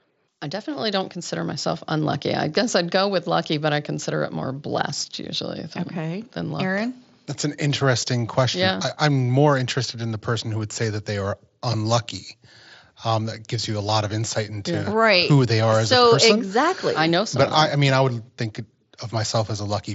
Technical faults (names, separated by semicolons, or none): none